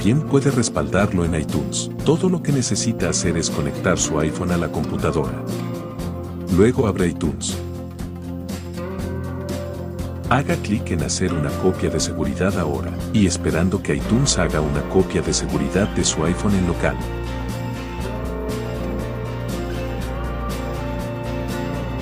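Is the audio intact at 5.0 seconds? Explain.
Yes, the audio is intact at 5.0 seconds, with no dropout, click, distortion or other fault at that moment.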